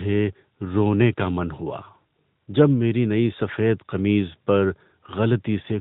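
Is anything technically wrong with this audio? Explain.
Yes. Throughout the clip, the speech carries AMR narrowband mobile codec damage. The 8 kHz sampling removes everything above 4 kHz, and the pulse-driven vocal-tract model gives a plainly buzzy, synthetic edge, consistent with a higher-rate AMR-NB mode around 10.2 kbps.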